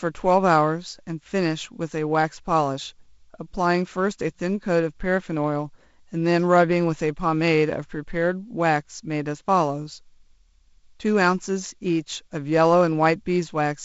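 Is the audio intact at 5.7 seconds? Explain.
Yes, the audio is intact at 5.7 seconds, with no fault at that moment beyond the ordinary sound of its G.722 wideband telephone coding.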